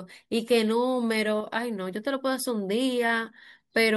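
At 1.41 s the speech suddenly loses level. It falls by about 6 dB and recovers at 1.47 s, roughly 60 ms later. The dip is abrupt at both edges, like a brief hole punched in the sound. The likely cause is that one channel drops out. When the two channels are summed to mono, losing one halves the shared signal and produces exactly this step.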